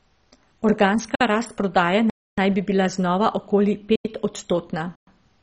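Throughout the speech, nothing reaches above about 10.4 kHz, and the sound turns dull and gurgling, with a granular edge as upper bands flicker in and out. The cause is likely heavy MP2 compression, its sub-bands starved of bits in a way that fits roughly 32 kbps.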